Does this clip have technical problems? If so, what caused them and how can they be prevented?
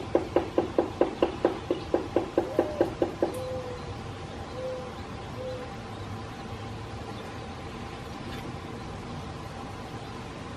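No, this clip doesn't have any technical problems, so there's nothing to trace or prevent.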